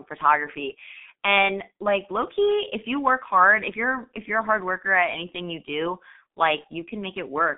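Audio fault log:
Throughout: G.723.1 codec. The speech is heavily damaged by a low-rate telephony coder. Its sound fits G.723.1 at about 6.3 kbit/s. Energy sits in a narrow band from 200 Hz to 3.6 kHz, with nothing above 3.8 kHz, so everything is muffled. The coder works in 30 ms frames and its model of the voice changes only slowly, which smears fast consonant transitions and leaves vowels rough and hoarse.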